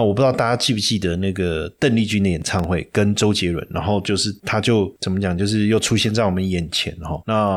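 From 2.42 to 2.64 s the speech breaks into processor overload crackle: the processor could not finish its very short audio buffers, around a millisecond and a half each, in time, and about seven deadlines slipped in quick succession. Each miss drops a brief stretch of silence with hard edges, so the sound turns gritty and torn until the load eases. A waveform would show tiny flat gaps with abrupt steps; a spectrogram, thin vertical broadband streaks clustered across that span.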